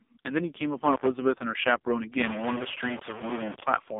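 Across the whole recording the speech carries the AMR narrowband mobile codec. It passes only a telephone band of roughly 250 Hz to 3.6 kHz, and nothing at all reaches past 3.7 kHz. The vocal-tract model, fed too few pulses per frame, leaves the voice heavily buzzy and synthetic, which points to one of the lowest AMR-NB modes, near 5.15 kbps. A spectrogram shows a flat ceiling at 3.7 kHz with smeared, blocky harmonics beneath it.

From 2.21 s to 3.64 s a distortion rides on top of the speech, and the gaps between syllables fill with steady hiss instead of falling quiet. This is most likely a stuck bit: one bit of every sample is held at a fixed value, so about half the samples jump by that bit's weight and small values flip around zero. On a waveform the section looks jagged with a raised floor. A spectrogram shows broadband noise smeared across the whole band.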